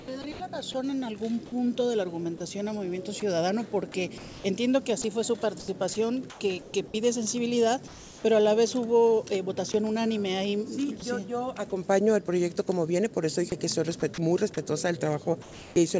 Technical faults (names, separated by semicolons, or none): sound chopped by the voice detector; sound dropped by the voice detector; comfort noise in place of the background